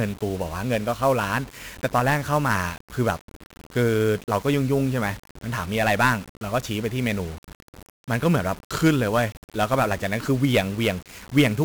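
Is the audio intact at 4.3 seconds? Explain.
No. At 4.3 seconds the speech is degraded by 1-bit DFPWM compression, which runs through the whole clip. Each sample keeps only one bit, nudging an adaptive level up or down. The heavy quantisation noise makes the sound fuzzy and crackly, with the treble buried in hiss.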